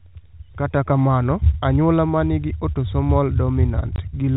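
A speech clip with one clear packet loss filled with silence, right near the end: the audio drops out completely from 3.96 to 3.98 s, a 20 ms hole with hard edges. The receiver evidently got nothing for that stretch and just played silence, and a 20 ms gap fits two lost 10 ms packets. It's all heard through the usual telephone band of G.711 coding, with nothing above 4 kHz.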